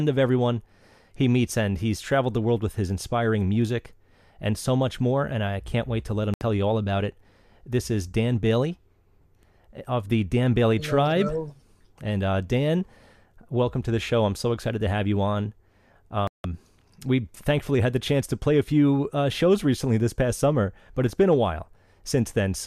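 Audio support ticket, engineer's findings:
Digital broadcast dropout, two spots. 6.34 to 6.42 s: speech mutes for about 80 ms, then picks up mid-stream, so that bit's gone for good. 16.27 to 16.45 s: same again, longer, roughly 170 ms of silence. Probable component is the receiver/decoder: frames failing checksum or signal lost, so it mutes until clean frames return. The gap lengths fit runs of about three and seven 24 ms frames.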